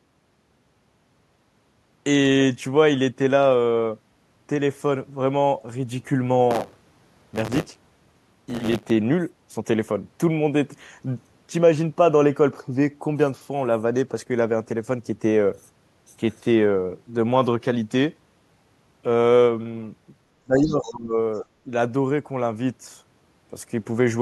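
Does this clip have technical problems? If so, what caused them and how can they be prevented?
Yes. There are three kinds of fault.

Buffer tearing runs from 6.5 to 8.91 s. A rough, robotic buzz sits on the speech at 100 Hz. It is there only while sound is present. The writer and reader of a ring buffer have slipped and cross inside every period. About 15 percent of each buffer replays audio from roughly 20 ms earlier, with hard joins on each side. The 100 Hz rate fits a 10 ms period. Prevent it by keeping the write pointer a safe margin ahead of the hardware read position.

Speech suppressed in double talk begins at 20.44 s. The speech drops by around 20 dB until 21.16 s. A brief dip of about 5 dB follows from 21.65 to 21.69 s. The likely cause is an echo canceller that could not tell the talker from the loudspeaker echo while both sides spoke. It turned both down. A canceller with a proper double-talk detector would prevent this.

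The other side's voice is leaking through in three short scraps. They fall at 20.62 to 20.66 s, 20.83 to 20.93 s and 21.34 to 21.39 s. They sit roughly 25 to 40 dB below the speech. The likely cause is loudspeaker playback reaching the microphone that the canceller failed to remove fully. Better echo cancellation or a headset would stop it.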